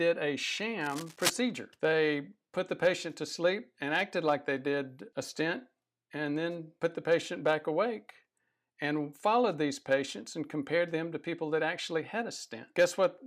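A worn cable or connector that was likely disturbed near the start of this speech clip is behind a burst of cable scratch noise from 0.81 to 1.30 s. As the contact shifted, its resistance jumped around rapidly, injecting dense, irregular crackle into the signal for about half a second. The result is a rough scratching, rustling layer sitting only a little below the level of the speech before it clears.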